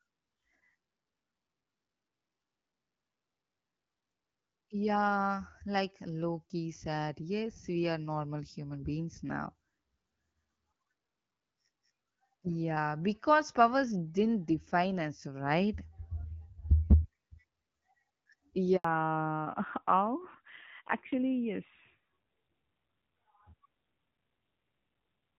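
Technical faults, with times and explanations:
18.76–18.84 s, handover gap: the speech cuts out for 80 ms as the call switches networks and no speech frames arrive, so the sound fades within a few tens of milliseconds into silence. On the waveform this shows as a short flat stretch, and on the spectrogram as a blank vertical band across all frequencies.
18.84 s to the end, fallback to narrowband: after the handover the call leaves HD Voice, where the AMR-WB coding carried clear, light-damage wideband speech, and drops to a narrowband codec, which fits AMR-NB at 7.4 kbit/s. Nothing above 4 kHz remains, so the speech sounds duller and rougher. The spectrogram shows a sharp ceiling at 4 kHz from this point on.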